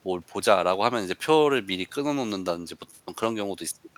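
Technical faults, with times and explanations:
No technical faults detected.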